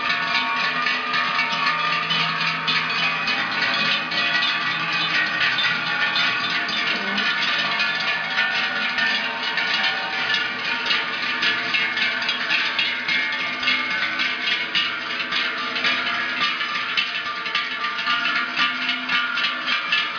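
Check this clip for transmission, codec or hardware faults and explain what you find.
Nothing to flag here; I listened through and didn't hear any problem worth pointing out.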